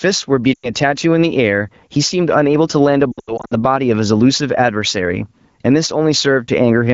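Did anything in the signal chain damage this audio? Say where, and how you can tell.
Yes. The first problem is gain pumping, which runs through the whole clip. The gain swings by roughly 15 dB. That's most likely the mic gain set way too hot at capture, with a fast limiter or compressor in the call processing clamping each loud peak. The result is squashed speech, with loud and soft parts pulled closer in level.

The second problem is in the network, on the radio link: lost AMR speech frames. Around 0.54 to 0.70 s the sound drops out to near silence for about 100 ms, which fits a short burst of consecutive bad frames. When frames fail their checksum, the decoder keeps replaying the last good pitch and vocal tract settings while turning the gain down. From 3.12 to 3.54 s the losses are scattered across about 400 ms. The longest gap is about 80 ms, and roughly 240 ms goes missing in total, so you hear repeated warbles and dips, and the voice comes back weak or rough for a moment. 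The AMR-WB codec underneath, at 15.85 kbit/s, sounds clean apart from light coding texture.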